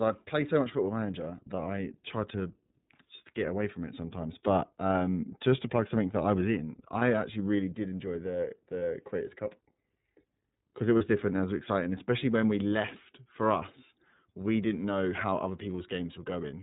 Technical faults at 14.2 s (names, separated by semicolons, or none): iLBC codec